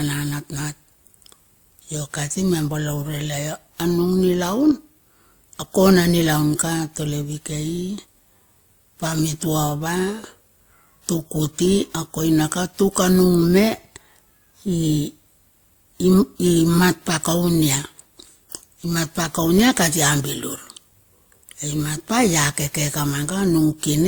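From start to finish the speech carries two layers of compression damage at once, the artefacts of each codec heard together. That mix points to transcoding between lossy codecs, most likely an older WMA encode at around 96 kbit/s later squeezed into Opus at around 32 kbit/s. The second codec spends its bits re-encoding the first one's artefacts and adds its own. The top end still reaches about 20.1 kHz.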